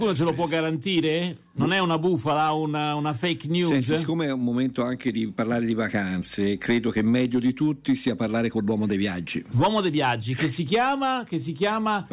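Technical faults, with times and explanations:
No technical faults, with times and explanations, can be given, as there are none.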